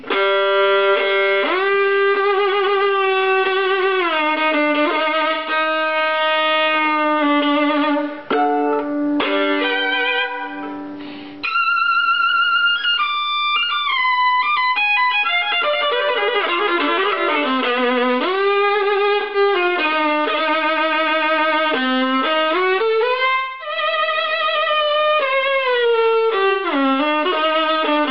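At 5.34 to 5.50 s, 19.21 to 19.37 s, 23.35 to 23.76 s and 26.50 to 26.66 s, AAC frame loss with concealment leaves smeared, noisy patches where the decoder rebuilds missing audio from the last good spectrum. The shorter gaps fit about 128 ms of lost data and the one at 23.35 s about 256 ms. On a spectrogram each patch shows blurred, frozen-looking harmonics and lost fine detail, while the waveform keeps its envelope but loses its sharp transients.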